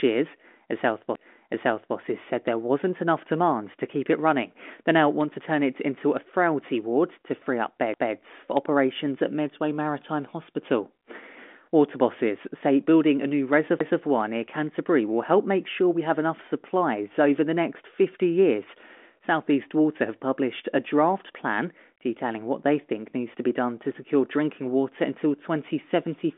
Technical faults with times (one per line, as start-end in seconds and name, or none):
1.15 CD skip
7.94 CD skip
13.79 CD skip